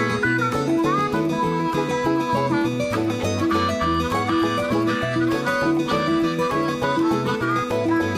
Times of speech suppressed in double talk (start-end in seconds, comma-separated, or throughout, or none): none